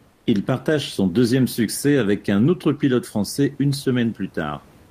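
From 0.11 to 0.23 s, about 120 ms of the room noise is replaced by comfort noise: a steady, featureless hiss about 4 dB quieter. The likely cause is discontinuous transmission, consistent with Opus DTX, where the receiver synthesises noise while the sender pauses.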